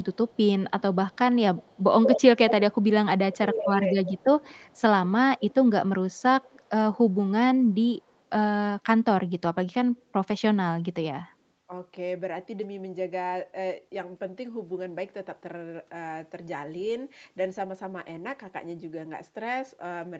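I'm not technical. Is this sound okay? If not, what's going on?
No. The first problem is an echo leak: the far end's echo canceller likely let loudspeaker sound back into its microphone. You hear a delayed copy of the voice, about 0.17 seconds behind, strongly from 0.02 to 3.6 s, then faintly at 4.22–4.81, 5.39–5.54, 6.1–6.69, 7.63–8.11 and 9.97–10.02 s.

The second is speech suppressed in double talk: with both sides talking, the canceller likely turned the talker down too. Between 3.37 and 4.21 s the voice dips sharply for most of that stretch.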